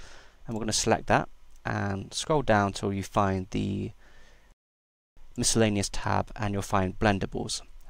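The audio runs without a break until 4.52 s, where it stops abruptly and leaves a silent gap lasting about 650 ms. Sound returns at 5.17 s. This is a playback stall: the output went dead partway through the audio rather than at a natural pause. The likely cause is the player running short of data, or its playback thread being held up, so nothing reached the output until it recovered.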